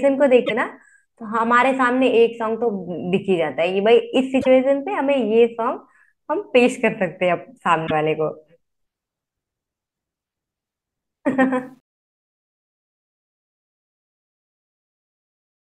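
This speech clip likely passed through an MP3 stream that lost whole frames, breaking the bit reservoir: each frame after a gap reached back for borrowed data and decoded bytes that belonged to a different frame. The sound jumps forward and the first frames after each cut come out as brief chirps or noise bursts, at 0.45–0.51 s, 4.41–4.47 s and 7.86–7.91 s, spans that fit a few 24 ms frames. The fade-out beginning around 11.6 s was handled by a level stage that discarded low-order bits without dither, which fits a 10-bit path. That is truncation distortion on a fade. From 11.58 s the tail grows grainy, and from 12.62 s to the end the waveform collapses into coarse steps, so the quietest part sounds gritty.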